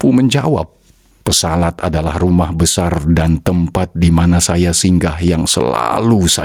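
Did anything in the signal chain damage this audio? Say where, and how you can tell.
Yes. The damage is gain pumping, present for the whole clip, and it most likely comes from the input stage, where the gain was set far too high for the microphone and a fast limiter or compressor kept clamping it. The gain swings by around 15 dB, so loud and soft passages sit squashed together. A noise gate would cut the background in the gaps rather than raise it.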